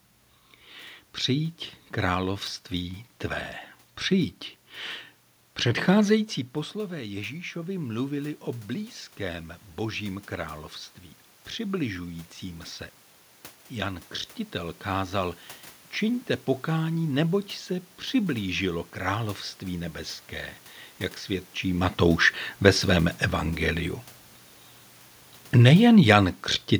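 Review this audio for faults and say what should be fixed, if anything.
Automatic gain rising from 6.88 to 12.71 s: after the talker moved back around 6 s, the AGC slowly added about 7 dB, swelling voice and room noise together. To prevent it, fix the input gain, or cap the AGC's maximum boost so a talker's movement doesn't trigger this slow swell.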